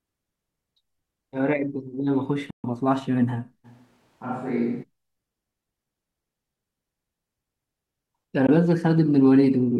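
A speech recording with two kinds of fault. A Bluetooth dropout, likely packets failing to reach the headphones in time, cuts the output to silence from 2.50 to 2.64 s (about 0.13 s, which fits several lost packets) and again from 8.47 to 8.49 s (about 15 ms), with speech resuming as if it had played on through each gap. From 3.66 to 4.82 s the recording is likely a switch to a distant microphone after the close one dropped out: the speech abruptly turns roomy and hollow with thinner bass, at much the same level, over faint background noise roughly 35 dB below the speech, then snaps back.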